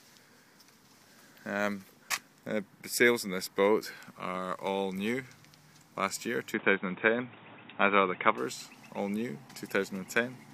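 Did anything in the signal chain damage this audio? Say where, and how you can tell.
Yes, at the input stage. From 6.54 to 8.38 s the audio turns boxy, with nothing above 3.8 kHz, a level change of roughly 5 dB and a fresh, low noise floor, then clears with no gap. Likely an input switched to a poorer device mid-recording.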